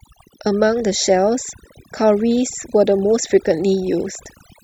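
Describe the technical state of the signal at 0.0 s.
At 0.0 s the speech is already under overdone noise removal, which runs through the whole clip rather than starting at a point. The noise reducer is set so aggressively that any frequency band sitting near its noise estimate gets pulled far down or shut off, and the softer parts of the voice are cut along with it. That leaves a background of near silence scattered with twinkling specks. Those isolated, flickering fragments are what separate it from a plain low-pass, which dulls the sound evenly.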